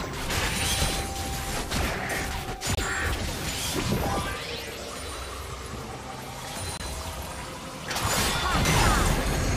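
At 2.75 s and again at 6.77 s the sound stops for about 25 ms, a gap between chunks in each case. The audio was delivered in 4-second blocks, and at each join a stretch of silence was inserted before the next block began, so nothing is missing, only pushed later. The 4-second spacing and the identical length of both holes set this apart from a random dropout, where audio is lost and the interruptions fall irregularly.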